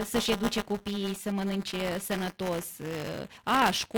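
A steady robotic buzz at 200 Hz runs through the whole recording and sounds only while there is signal. This is buffer tearing. The writing side and the reading side of the playback ring buffer have slipped out of step, so every 5 ms period contains a small slice, around a fourteenth of it, that is stale audio from roughly 15 ms earlier. Each slice has hard joins on both sides. On a waveform these show as regular discontinuities every 5 ms. On a spectrogram they appear as a comb of harmonics spaced 200 Hz apart that fades wherever the sound stops. At 3.61 s a single compressed frame, about 23 ms long, is skipped, which fits a 1024-sample frame at 44.1 kHz. Roughly 20 ms of audio jumps forward.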